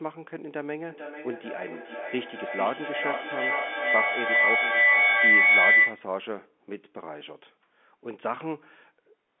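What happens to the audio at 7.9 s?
Nothing goes wrong at 7.9 s; the speech carries on intact there, with only the narrow telephone-line band of the G.711 coding that it has throughout.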